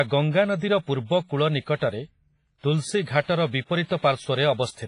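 Heavy WMA compression, likely from a low-bitrate encode around 24 kbps, affects the whole speech clip. Its quantisation noise smears across tens of milliseconds, so the speech rings and sounds washy, with a hiss that breathes along with it, and nothing remains above 10.5 kHz.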